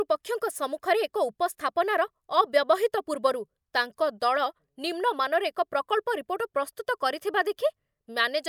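Nothing technically wrong turns up anywhere in this speech recording, so there's really nothing here to flag.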